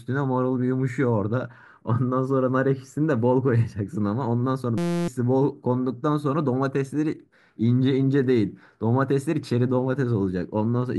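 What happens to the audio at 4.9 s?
At 4.9 s the speech is replaced by a system hang loop from 4.78 to 5.08 s. A 5.8 ms slice of audio, which fits a 256-sample buffer, repeats about fifty times, producing a steady 172 Hz buzz and losing roughly 300 ms of speech.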